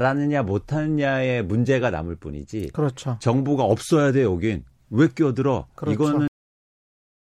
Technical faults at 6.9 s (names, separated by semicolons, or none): cut-off end